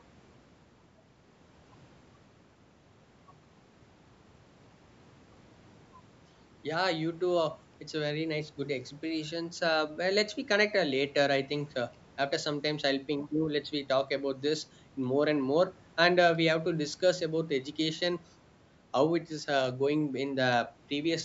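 No faults can be heard anywhere in this speech.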